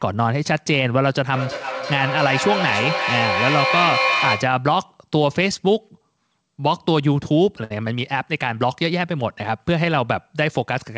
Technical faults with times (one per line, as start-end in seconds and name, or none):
1.32-4.69 feedback echo between two devices
7.64-7.72 short stall from a late packet